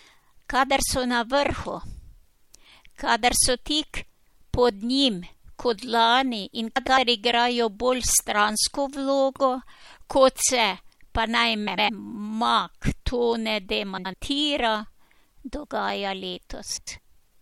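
Speech, where frames out of order means neighbouring runs of frames were decoded swapped, giving brief garbled flutters: after "so na vrhu" at 2.20 s, after "njim kot lani in" at 6.76–6.98 s, after "kot se pa naj" at 11.67–11.89 s, then 13.97–14.14 s and 16.77–16.99 s, with swapped blocks of about 26–105 ms, which fits 26 ms frames.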